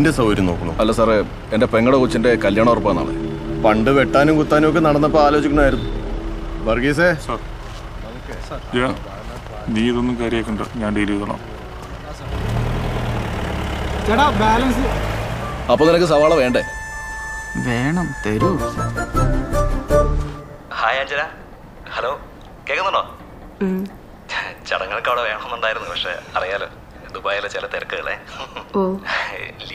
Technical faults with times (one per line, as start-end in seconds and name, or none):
7.18-7.21 compressed frames skipped
26.64-26.68 compressed frames skipped